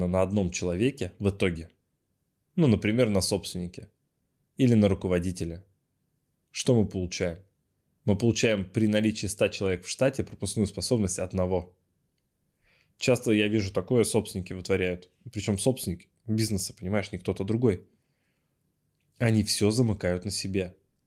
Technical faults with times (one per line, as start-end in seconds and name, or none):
none